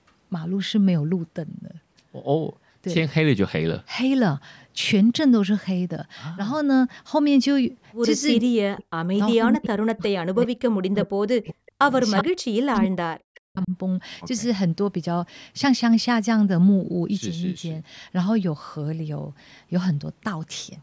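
From 8.67 to 9.16 s, and again from 9.37 to 11.84 s, the speech sinks almost to silence in chunks. This is speech suppressed in double talk, likely. The echo canceller treated the near talker as echo while both sides spoke, and turned everything down.

At 10.40 to 10.47 s, a faint delayed copy of the speech slips through, well below the main level. At 12.18 to 12.24 s, another one arrives, nearly as loud. Both are echo leak, lagging 369 ms. The canceller likely failed to remove the loudspeaker pickup.

From 12.23 to 13.72 s, the suppression returns, and the speech again drops very deeply for about a second and a half.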